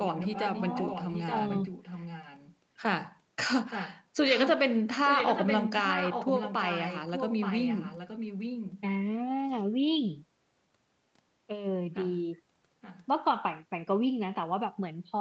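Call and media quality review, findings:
Echo leak, 0.00–2.56 s, 3.66–4.04 s, 4.26–4.54 s, 5.05–8.81 s, 12.81–13.06 s. Speech returns as a distinct delayed copy about 873 ms behind, roughly 10 dB down at first, nearer 5 dB down in 4.26–8.81 s, faint at 12.81 s. Likely far-end loudspeaker echo canceller under-suppressing. Unlike room reverb, the copy is discrete and late, not a smeared tail. Content is limited to the call's 8 kHz band.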